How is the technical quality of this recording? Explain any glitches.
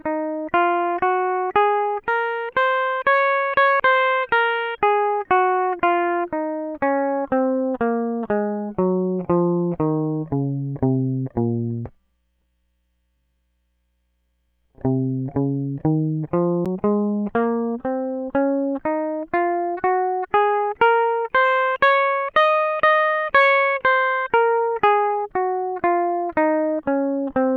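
The recording has two CD skips, at 3.80 s and 16.65 s. Each one is a tick with a very short mute, around 7 and 10 milliseconds respectively. A knock or disc flaw sent the laser to another turn of the spiral. The music then resumes abruptly from a different place.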